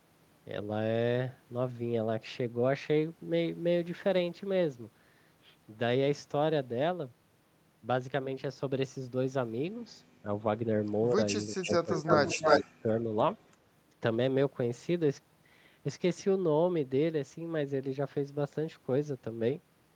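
A speech recording with two problems in the same stretch. There's speech suppressed in double talk at 10.23 to 10.27 s, 11.48 to 11.89 s, 12.05 to 12.09 s and 12.63 to 12.98 s. The voice ranges from a slight dip to being nearly cut out, likely because the echo canceller ducked everything while both sides talked. Echo leak shows up at 11.61 to 11.71 s, 11.9 to 12.63 s and 13.39 to 13.56 s as a copy of the voice trailing by 332 ms. It's faint at first, then louder than the speech itself, then barely there. The likely cause is a speakerphone whose canceller let part of its pickup slip back.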